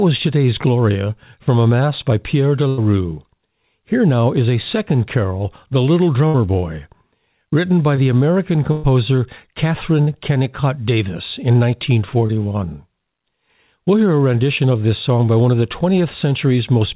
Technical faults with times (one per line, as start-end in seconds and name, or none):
2.68-2.79 burst of packet loss
6.27-6.36 burst of packet loss
7.96-7.99 short concealed packet loss
8.71-8.85 burst of packet loss
10.01-10.09 burst of packet loss
12.27-12.31 short concealed packet loss